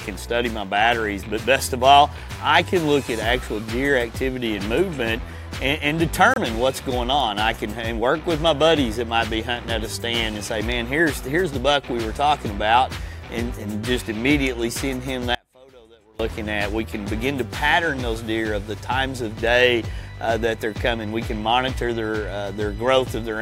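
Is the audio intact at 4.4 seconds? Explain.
Yes, the audio is intact at 4.4 seconds, with no dropout, click, distortion or other fault at that point.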